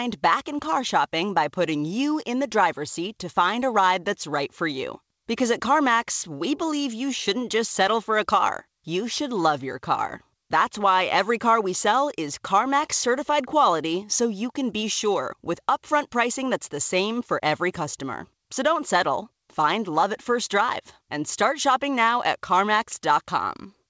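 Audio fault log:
No faults found; the speech carries nothing above 8 kHz, which fits a call path using G.722 at 64 kbps.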